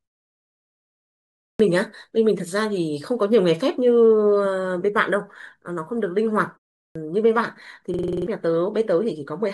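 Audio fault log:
1.44 s and 6.81 s, clipped start after a pause: after silences of 1.44 s and 0.31 s, the output device was still waking, so about 156 ms and 144 ms of speech onset were lost. On the waveform, energy jumps straight from flat silence to full level, and the spectrogram lacks the energy of the first sounds.
7.94–8.27 s, system hang loop: the system froze while the hardware kept replaying one 46 ms piece, which fits a 2048-sample buffer, seven times at 21.5 Hz. This is heard as a machine-gun stutter that replaces about 0.3 s of speech. The waveform shows identical repeating blocks, and the spectrogram shows vertical striping at that rate.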